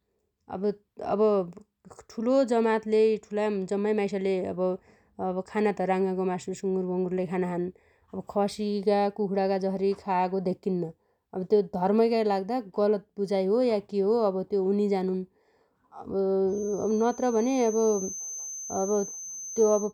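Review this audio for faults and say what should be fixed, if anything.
A feedback whistle runs from 16.46 s to the end at 19.93 s: a thin, steady 6.2 kHz tone roughly 15 dB under the speech, swelling and fading slowly in level. Likely cause: a loudspeaker-to-microphone loop held just below runaway, sustaining one frequency. Prevent it by lowering monitor gain, notching 6.2 kHz, and keeping the microphone out of the loudspeaker's path.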